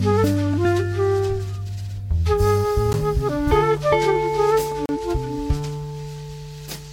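At 2.93 s, and again from 4.86 to 4.89 s, the music drops out in a block of digital silence: the output stage failed to deliver those samples in time, so zeros went out instead. The first gap lasts 10 ms and comes across as a sharp tick; the second, about 34 ms, is long enough to register as a brief hole. Both cut off and resume abruptly.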